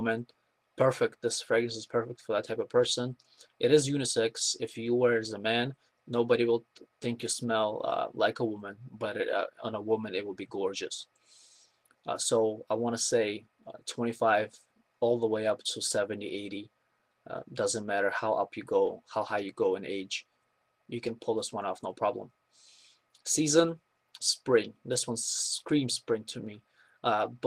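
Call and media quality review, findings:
No audible faults found; nothing to escalate.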